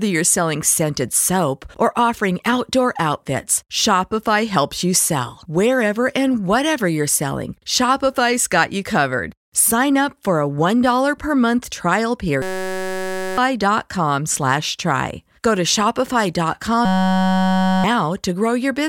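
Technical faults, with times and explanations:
12.42–13.38 s (after "per month trial") and 16.85–17.84 s, system hang loop: a 5.33 ms slice, consistent with a 256-sample buffer, repeats, giving a steady 188 Hz buzz in place of about a second of audio each time. The waveform shows identical repeating cycles, and the spectrogram shows flat harmonic lines spaced at 188 Hz.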